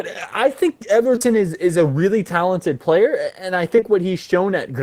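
A brief smeared wobble interrupts the speech from 1.15 to 1.26 s, and a shorter one follows from 3.76 to 3.84 s. Both are short concealed packet loss, three consecutive losses in the first cluster and two in the second, each about 20 ms of missing audio, which fits 20 ms packets. The receiver papered over each gap by extending the preceding sound for 14 to 20 ms before blending back into the real signal.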